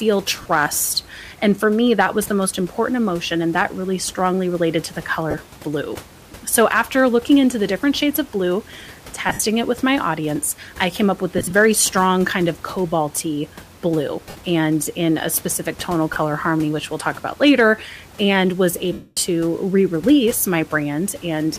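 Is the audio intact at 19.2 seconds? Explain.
Yes, just barely. From 18.93 to 19.17 s there are lost LE Audio frames, a 240 ms gap where the decoder keeps replaying the last spectrum with scrambled signs. That makes a noisy smear that fades toward silence before the sound returns around 19.2 s.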